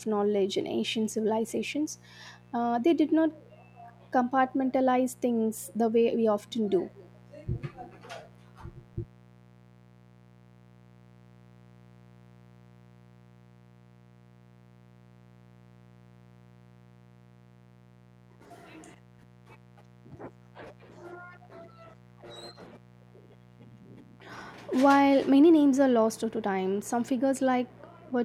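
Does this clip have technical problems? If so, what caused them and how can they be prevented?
Yes, mains buzz runs through the whole speech clip, a raspy 60 Hz buzz roughly 30 dB below the speech. Sharp switching spikes twice per cycle spread harmonics into the kilohertz range, seen as evenly spaced horizontal lines on a spectrogram. Shielded, balanced cabling away from dimmers prevents it.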